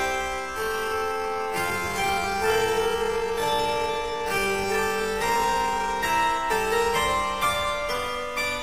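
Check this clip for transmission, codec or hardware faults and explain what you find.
One fault is present: a time-stretched section covering the first portion of the clip.

From 0.0 to 5.9 s the audio plays at roughly half pace (0.51x) while pitch stays unchanged, sounding dragged before normal pace returns abruptly. The likely cause is software lengthening the segment by repeating short pieces to fill a target duration.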